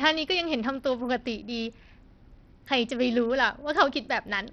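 From start to finish the speech sounds gritty and thin, the treble dropping out and flickering, with a coarse aliased haze riding on it. The likely cause is heavy Bluetooth SBC compression starving the upper sub-bands of bits, which fits a bitrate near 64 kbps.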